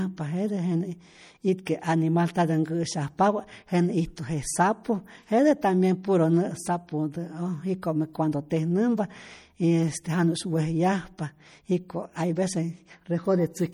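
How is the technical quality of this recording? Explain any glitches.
The recording has audible damage throughout and two brief smeared attacks.

MP3 compression, throughout: the speech has a watery, swirly texture, with faint detail flickering in and out between moments. Nothing is heard above 21 kHz. The plainly audible damage points to a low bitrate around 48 kbps. The likely cause is an encoder short of bits, zeroing weak frequency lines that then switch on and off frame to frame.

Pre-echo, at 1.65 s and 7.82 s: a short hiss, about 14 ms and then 10 ms long, comes just before a sharp onset, and the attack sounds softened. The codec spread noise sized for the loud attack across its whole block, filling the quiet moment before it.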